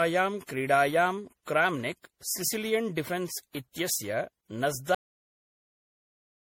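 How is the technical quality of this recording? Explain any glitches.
The recording has two clear technical problems: a degraded, processed quality throughout, and an abrupt ending.

Generation loss runs through the whole clip. The speech sounds swirly and hollow, with smeared consonant attacks and a watery texture that is worse than a single lossy encode would produce. The likely cause is repeated lossy encoding, roughly seven passes through MP3 at about 64 kbit/s. Each pass re-quantises on a shifted frame grid, so the noise and missing bands accumulate. On a spectrogram this shows as patchy, flickering holes between harmonics and blurred onsets, with nothing above 20.3 kHz.

There is a cut-off end at 4.95 s. The speech stops in the middle of a sound and drops straight to digital silence, which lasts until the clip ends. There is no natural decay, because the final stretch of audio was never written out. 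On a waveform the signal ends as a vertical edge followed by silence. On a spectrogram the energy ends along a sharp vertical boundary with no fading tail.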